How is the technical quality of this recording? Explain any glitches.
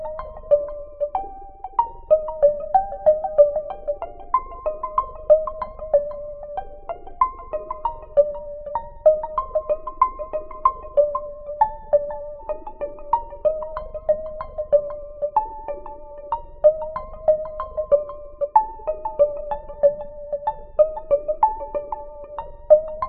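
There's one glitch worth flagging. At about 8.74 s there's a very short blip, a sign of damaged data in the compressed stream. Part of the data went bad, so the decoder misread that frame, lost sync and had to hunt for the next frame header.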